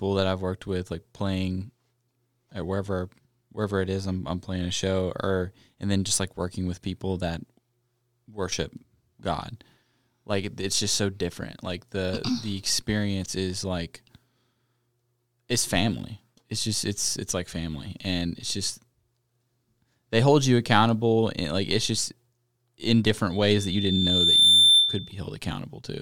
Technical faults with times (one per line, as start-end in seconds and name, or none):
23.30-25.21 loudspeaker feedback squeal